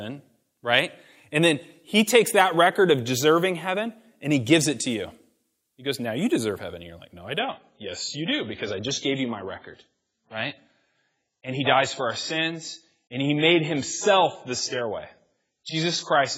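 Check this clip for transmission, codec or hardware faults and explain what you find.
One fault: at 7.39 s the speech drops to an adaptive stream at a lower bitrate until the end. The connection slowed, so the player switched abruptly to a leaner encode. With no gap, treble vanishes above 7.6 kHz and artefacts thicken, which fits roughly 16 kbit/s AAC.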